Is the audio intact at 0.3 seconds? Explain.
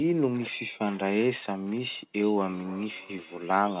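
Yes, the speech is intact at 0.3 seconds, with no dropout, glitch or distortion there, only the narrow telephone band of the call path, which has nothing above 4 kHz.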